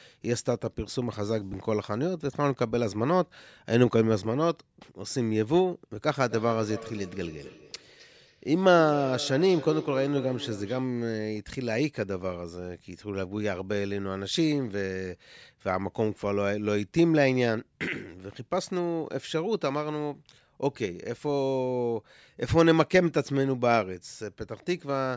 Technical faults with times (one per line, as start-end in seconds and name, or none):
6.09-10.93 feedback echo between two devices